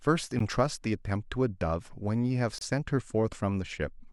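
At 0.39 s and again from 2.58 to 2.61 s the speech drops into brief silences of about 13 ms and 28 ms: gaps at joins of encoded pieces, where untrimmed encoder start delay and last-frame padding were left in, leaving smeared, abrupt holes before the speech resumes.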